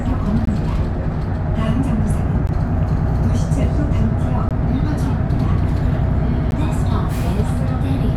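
A recording of sounds, broken by a gap between stream segments: short hard-edged dropouts to silence, about 14 to 19 ms each, at 0.45, 2.47, 4.49 and 6.51 s. The two-second spacing points to segment timestamps leaving small holes the player pads with silence, so nothing's actually missing.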